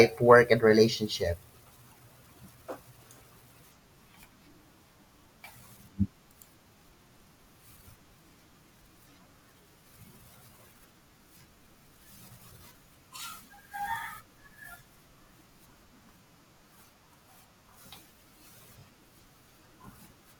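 A brief stutter falls between 18.79 and 18.81 s, near the end of the speech. This is a repeated frame: one 21.3 ms block, which fits a single compressed frame, plays twice, adding 21.3 ms to the audio.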